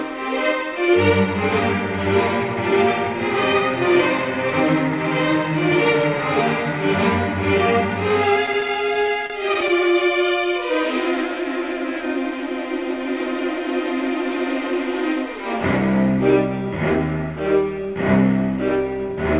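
From 8.46 to 9.70 s you get repeated stalls, a proper stutter. Packets were turning up late or slower than playback, so the jitter buffer kept draining, seventeen times in that stretch. Each time the receiver stretched the last bit of sound to cover the hole, with the longest wait about 36 ms. Roughly 185 ms ends up concealed, around 15% of the span, but nothing is actually lost. It just drags and hiccups, heard through the call path's band-limited G.711 sound that stops at 4 kHz.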